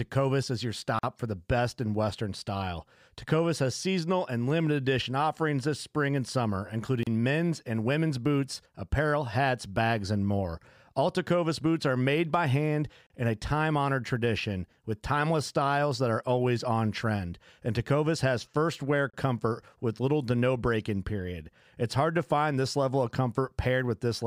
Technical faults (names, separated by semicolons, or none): gap at a join of encoded pieces